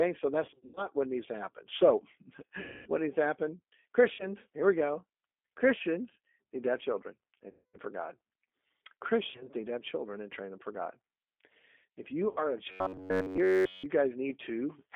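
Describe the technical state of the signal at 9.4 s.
At 9.4 s, the speech sits inside a stretch of VoIP packet loss concealed by the speech codec, from 9.31 to 9.48 s. About 70 ms of audio went missing, spread over 100 ms, with the longest gap 40 ms. The decoder filled each gap by extending its last pitch and filter at falling gain. The result is a buzzy stretched tone or a fading coloured noise. The voice stays weakened or distorted briefly after packets return.

The whole clip also carries the G.729 codec at 8 kbit/s. It rebuilds speech from a vocal tract model, a pitch predictor and a few pulses per frame. The band runs from 250 Hz to 3.5 kHz. The rough, synthetic coding damage is plainly audible.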